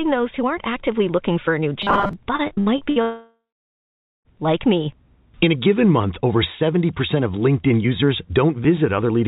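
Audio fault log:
1.82–2.13 s, robotic sound from repeated short buffers: right after "looking for a new" the speech collapses into a stiff, metallic buzz at about 200 Hz that still loosely tracks the syllables. That buzz likely comes from the playback side starving for fresh audio and looping a tiny 5 ms slice over and over, with most of the stretch being repeats rather than real signal, so the loop length sets the pitch you hear.
2.36–2.99 s, repeated packet loss (robotic sound): here it's choppy rather than a steady drone. Six separate holes, the longest about 65 ms, each got patched by stretching out the last bit of sound, roughly 240 ms missing in total, so close to two-fifths of this span is filler. Because the gaps come in quick succession, the patches run together into a broken, robotic stutter with chunks of speech simply gone.
3.02–4.28 s, long network dropout: right on the heels of that stutter, nothing gets through for about 1.2 s. 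You hear the last sound smeared on as a fading buzz for a few tenths of a second, then roughly 0.86 s of dead air, and the audio picks up again at "like me" with the intervening part lost for good. That pattern likely points to a sustained network outage rather than scattered packet drops. The call path underneath is narrowband, with nothing above 4 kHz, which fits a 64 kbps G.711 mu-law link.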